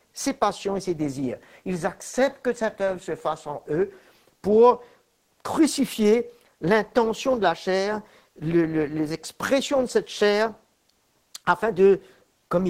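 No technical faults can be heard anywhere in the speech.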